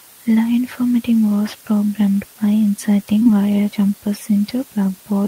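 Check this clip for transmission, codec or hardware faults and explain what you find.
Two faults are present in this speech clip.

Throughout, there is low bit depth with dither. Dithered rounding to very few levels, consistent with 6 bits, leaves an even hiss about 25 dB below the speech, with no distortion, unlike undithered quantisation.

Between 3.19 and 3.27 s, just before "wire jumpers", two back-to-back short concealed packet losses occur. About 20 ms of audio each time was synthesised from the preceding sound, giving a brief smear rather than the silent gap of an unconcealed dropout.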